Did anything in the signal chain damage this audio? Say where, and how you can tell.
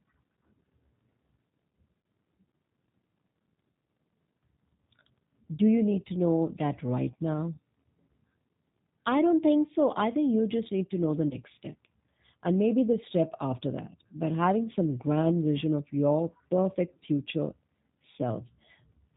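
Yes. G.729 codec damage runs through the whole speech clip, at the codec stage. Nothing above 4 kHz survives, and the voice has a rough, synthetic edge from being rebuilt out of a vocal-tract filter, pitch predictor and sparse pulses. This fits an 8 kbit/s encode.

VoIP packet loss concealed by the speech codec appears at the network stage, at 2.01–2.04 s and again at 11.28–11.36 s, just after "need to know the". Each gap fits one lost 30 ms packet. The decoder stretches its last pitch and filter into a buzzy tone or coloured noise that fades, and the second event stays weak well beyond the gap because later frames build on the damaged state.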